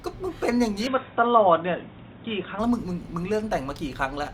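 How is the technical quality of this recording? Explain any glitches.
The recording has one glitch. From 0.87 to 2.59 s the speech turns dull and boxy, likely from an input switched to a poorer device with a narrower band. A spectrogram shows everything above 3.8 kHz cut off at a flat ceiling, plus a faint new noise floor. The waveform keeps its level, with no gap at either switch.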